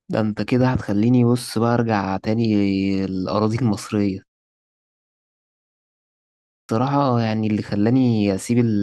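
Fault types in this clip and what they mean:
Clipped start after a pause: after a pause of about 2.1 s the output path needed time to wake, so roughly 0.39 s of speech from 6.3 s was lost, starting abruptly.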